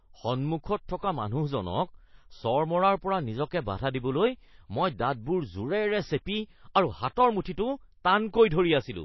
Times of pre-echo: 7.43-7.46

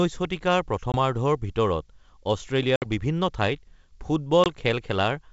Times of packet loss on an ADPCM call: 0.92-0.96, 2.76-2.86, 4.44-4.48

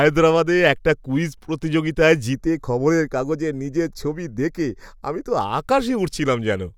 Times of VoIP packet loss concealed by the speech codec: none

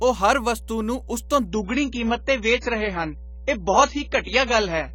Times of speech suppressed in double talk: none

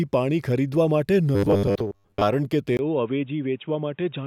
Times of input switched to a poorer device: 2.77-4.26

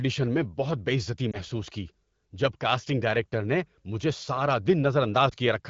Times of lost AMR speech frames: 1.32-1.37, 5.30-5.34

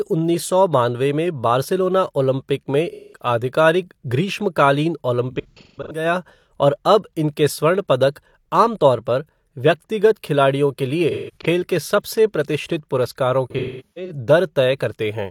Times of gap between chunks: none

